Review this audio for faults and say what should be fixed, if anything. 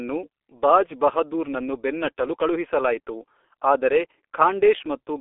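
Throughout the speech there is G.723.1 codec damage, and it is heavy. The band is confined to roughly 300 Hz to 3.5 kHz, with nothing above 3.6 kHz, so the voice is muffled and hoarse and the consonants smear together. The coarse, slowly updated vocal model fits a bitrate near 6 kbit/s. On a spectrogram, energy stops at a hard ceiling near 3.6 kHz, low frequencies are thinned below 300 Hz, and harmonics look blotchy and stepped over time. To prevent it, carry the call over a wideband codec at an adequate bitrate and avoid routing it through a G.723.1 leg.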